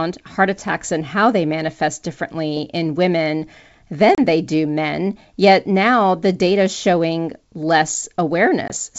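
At 4.15 to 4.20 s, just before "they do men yet", the speech drops into a hard-edged silent gap of about 30 ms of lost audio, consistent with a few packets lost on an ADPCM call. A second, shorter hole of about 20 ms follows at 8.68 to 8.71 s. In both, the decoder's adaptive predictor and step size drift out of step with the sender's, so speech resumes with brief, slight distortion before resettling within tens of milliseconds.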